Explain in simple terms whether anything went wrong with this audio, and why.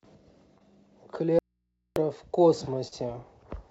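Short concealed packet loss occurs at 0.58 to 0.62 s and again at 2.88 to 2.94 s. Small pieces of the call, about 20 ms and then about 40 ms, arrived too late. The receiver patched each hole by stretching the sound just before it, leaving a brief smear or wobble.

An audio dropout to a faint residue runs from 1.39 to 1.96 s. The speech cuts out abruptly for just over half a second, and only a low, faint mains hum remains until it returns. The likely cause is that the signal feed was lost while the input stayed open.

The speech also lacks any sound above 8 kHz, which comes from the call codec's normal limit.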